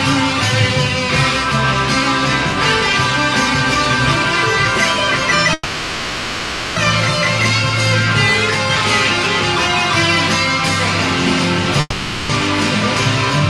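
At 5.53 s the sound stalls into a fading buzz or hiss for 1.23 s, and again at 11.80 s for 0.49 s, then resumes where it stopped, nothing lost. This call audio freeze is likely delayed packets emptying the jitter buffer.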